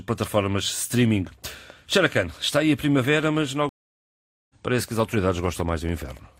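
A train of clicks runs from 1.27 s to 6.18 s: about twenty sharp, similar-shaped pulses arriving at roughly 3.9 per second but at an uneven pace, each peaking about as loud as the speech itself. They tick and pop over the talking and through the gaps between phrases alike. The likely cause is interference from nearby equipment or a faulty connection or power supply injecting repeated pulses into the signal path.

A stream reconnect interrupts the audio from 3.69 s to 4.54 s. The connection dropped, the player fell silent for about 0.8 s, then reconnected and began decoding afresh partway through the stream. When sound returns it has skipped ahead by roughly 0.7 s, so a stretch of speech is simply missing, and the restart fades in rather than continuing from where it broke off.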